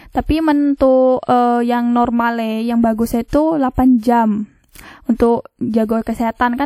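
Pre-echo appears in this speech clip from 3.28 to 3.33 s, a short hiss lasting about 53 ms just ahead of a sharp attack. The transform codec spread quantisation noise across its whole block, so noise sized for the loud onset leaks into the quiet moment before it, blurring the attack.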